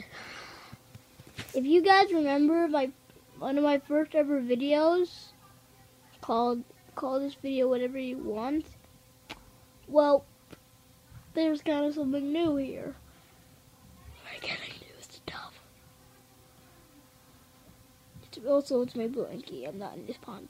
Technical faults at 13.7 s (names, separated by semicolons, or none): none